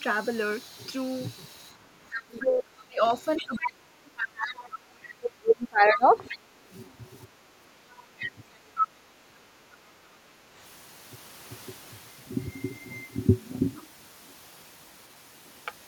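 Background gated by the echo canceller at 1.74 to 1.99 s: while the loudspeaker played, the canceller pulled the microphone down by about 9 dB, so the room sound dips briefly before recovering. The same gating returns at 7.27 to 7.39 s, about 11 dB deep, and at 9.99 to 10.41 s, about 6 dB.

Speech suppressed in double talk runs from 2.27 to 6.66 s. The talker's speech sinks by as much as roughly 25 dB in pieces totalling around three seconds, likely because the canceller could not tell the talker from the loudspeaker echo during overlapping talk and attenuated both.

The other side's voice leaking through appears at 3.37 to 4.56 s and 5.92 to 6.38 s, roughly 10 dB below the talker. A second voice sits underneath, likely loudspeaker echo the canceller left in the microphone signal. A louder leak, roughly 5 dB below the talker, follows at 7.9 to 8.88 s.

Speech suppression in double talk recurs at 8.18 to 9.34 s, overlapping that leak. 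The talker dips by up to roughly 25 dB for about a third of a second in total, likely the canceller again clamping down on simultaneous speech.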